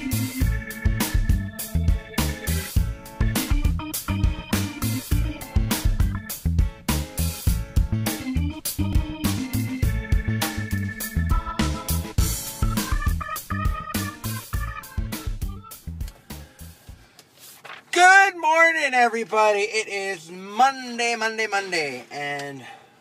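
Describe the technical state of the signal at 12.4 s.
At 12.4 s the signal is intact, with no audible fault at that moment.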